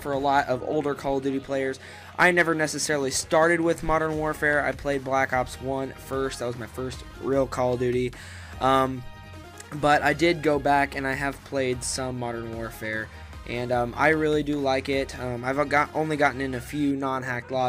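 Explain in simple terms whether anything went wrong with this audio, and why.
Nothing went wrong here: no audible faults anywhere in the recording.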